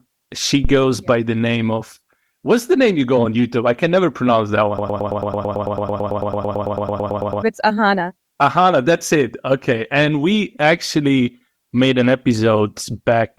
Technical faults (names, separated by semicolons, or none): phantom power thump; broken-record loop